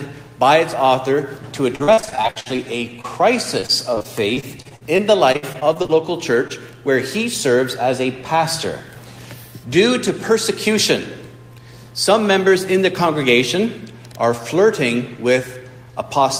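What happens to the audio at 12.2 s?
A jitter buffer speed-up runs from 12.13 to 12.67 s. Audio had piled up in the buffer beyond its target, so the receiver trimmed short pitch-period pieces in quick succession, about 40 ms in all. Playback briefly runs at 106% speed with unchanged pitch, sounding slightly hurried.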